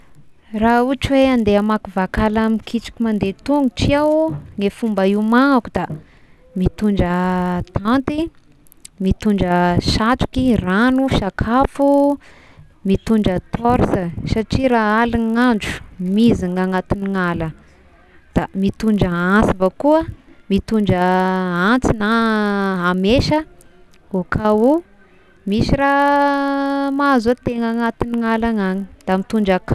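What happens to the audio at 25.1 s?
At 25.1 s the resampler restarted on every block is still at work, as it is throughout: each 20 ms block was converted from 48 kHz to 24 kHz alone, leaving a small error at every edge, heard as a 50 Hz buzz riding on the speech.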